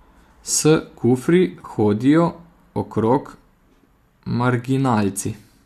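Speech clip with AAC frame loss with concealment from 1.54 to 1.70 s, just before "hodijo okrog". About 80 ms drops out in short gaps, the longest around 30 ms. The decoder patches them from earlier spectra, leaving a smeared, phasey flutter. The light low-delay coding throughout points to AAC-ELD as the likely codec.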